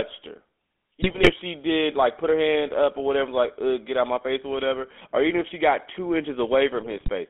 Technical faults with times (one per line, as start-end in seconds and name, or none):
0.00-7.29 GSM full-rate codec
1.02-1.32 GSM bit errors
6.80-7.10 GSM bit errors